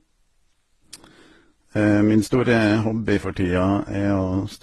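Throughout the speech, the sound carries mixed compression artefacts, the different artefacts heard together, with nothing above 19.7 kHz. This is likely transcoding between lossy codecs: each later encoder re-coded earlier damage, pointing to a low-bitrate HE-AAC stage followed by Vorbis and Opus.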